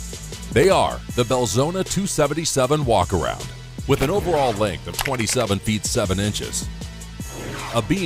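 A worn or dirty contact in the signal path is briefly making and breaking, chopping the audio into fragments. This loose connector crackle comes as two short, irregular bursts of scratchy crackle, from 0.63 to 0.69 s and from 3.99 to 4.06 s.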